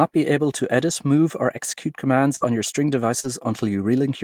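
At 2.35 s, right after "move or execute commands", a burst of packet loss removes about 60 ms of speech before "your string". The receiver extends the last sound for roughly 64 ms and lets it decay, so a held, fading tone or hiss sits in the gap before speech resumes past the lost stretch. On a spectrogram the harmonics smear flat and dim across 2.35 to 2.44 s, and the waveform shows a shrinking envelope, then a jump.

At 3.20 s, shortly after "your string", a short concealed packet loss drops about 40 ms of audio. The decoder fills roughly 41 ms by continuing the preceding sound, then crossfades back, trimming about 8 ms of the real signal as it rejoins. It comes across as a brief smear or wobble ending near 3.28 s. A spectrogram shows a short band of copied, blurred harmonics, and the waveform a slightly repeated cycle shape at the seam.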